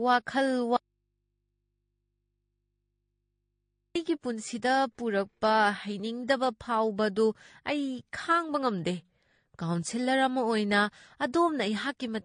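From the start, the speech carries the sound of transcoding between lossy codecs. Nothing reaches above about 9.7 kHz, so the top end sounds dull and boxy. On top of that sits a mix of smeared, watery artefacts and a swirly, metallic edge. This is likely a chain of two encoders, one after the other. The pattern fits an AAC stage at a low rate, around 32 kbit/s, then MP3 at around 48 kbit/s. The second encoder spent bits on the first one's damage and added its own.

At 0.77 s the speech cuts off abruptly. This is an audio dropout to a faint residue. It lasts about 3.2 s, until 3.95 s, when the speech returns mid-flow. There is no fade either way. The gap is not silent. A low mains hum remains, roughly 50 dB below the speech. This points to the signal being lost upstream while the path after the break stayed live, likely with an open input picking up hum.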